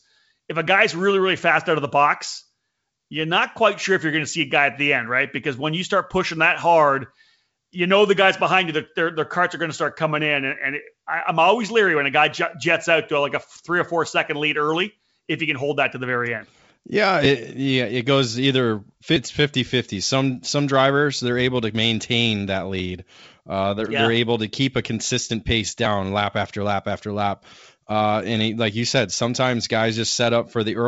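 Nothing here needs fixing: this speech clip comes through G.722 wideband telephone coding with the band simply topping out around 7.7 kHz, which is just how that codec shapes things.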